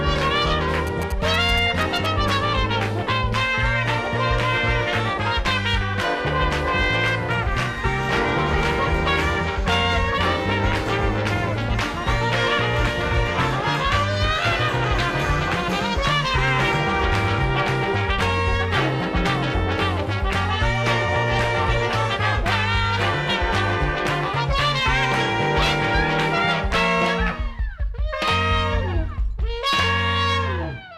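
From 0.87 to 2.3 s, GSM signalling bursts get into the audio path. A nearby 2G phone transmits only brief groups of radio bursts while signalling, and the audio circuit rectifies that RF into audio-band energy pulsing at about 217 Hz. The result is a galloping dit-dit-dit pattern of short buzzes, sitting roughly 15 dB below the main sound, stuttering on and off for about a second and a half before stopping.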